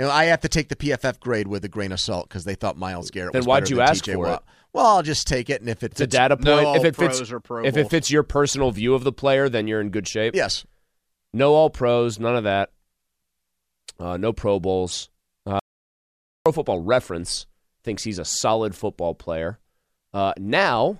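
An audio dropout to silence runs from 15.59 to 16.46 s, removing about 0.87 s of the speech. The voice stops abruptly mid-flow and resumes just as suddenly, and the gap between is dead digital silence with no trace of room tone or background noise. That points to the input signal being lost while recording continued, likely through a momentary disconnection, a failed link or a brief mute, so silence was written in place of the missing speech.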